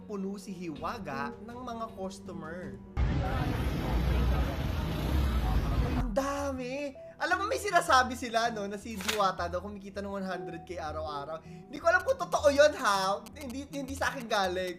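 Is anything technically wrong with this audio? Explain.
Yes, two faults are audible.

At 6.79 s there is a single sharp click, likely caused by dropped samples: a fraction of a millisecond goes missing, so the waveform jumps. Unlike a repeating dropout, it occurs only once.

From 12.0 to 14.7 s there are GSM signalling bursts. A nearby 2G phone's radio bursts are rectified by the circuitry, producing galloping short buzzes at 217 Hz, roughly 15 dB below the sound. The irregular dit-dit rhythm sets it apart from steady mains hum.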